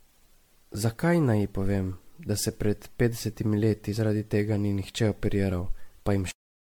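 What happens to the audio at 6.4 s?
A cut-off end: at 6.31 s the speech stops dead in the middle of a sound and falls straight to digital silence, so 6.4 s lies in that silence, which lasts to the end of the clip. The final stretch of audio was never written out or played, so instead of the sound decaying naturally the signal is simply severed, leaving an abrupt edge with no tail where the speech should have trailed off.

Generation loss runs under the whole clip, right up to that cut. The speech has a swirly, smeared, hollow character, with blurred consonant attacks, more than a single lossy encode would produce. This is likely from repeated MP3 decoding and re-encoding, around ten passes at a quality that fits 96 kbit/s. Each pass requantises on a shifted frame grid, so the noise and spectral gaps build up.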